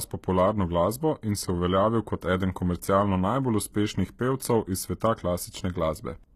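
Throughout the speech, the treble sounds bright yet synthetic, with gritty, lispy s sounds and nothing above 14.9 kHz, likely from HE-AAC compression rebuilding copied upper bands at a very low bitrate, rather than simply losing the treble.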